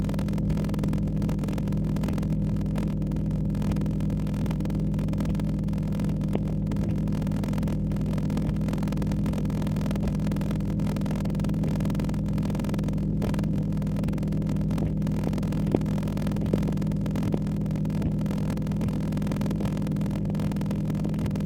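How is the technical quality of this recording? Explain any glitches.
Technical quality is poor, with two faults present for the whole recording.

Channel delay (comb filtering) runs throughout. One channel lags by a fraction of a millisecond, so summing to mono cancels evenly spaced frequencies from around 1.5 kHz upward, making the sound hollow and phasey.

A block size mismatch (padded) is also continuous. Blocks of 1024 samples are zero-padded to a longer read size, which fits 1152-sample blocks. This causes a 41.7 Hz buzz and slows playback to 0.889 times normal speed at roughly normal pitch.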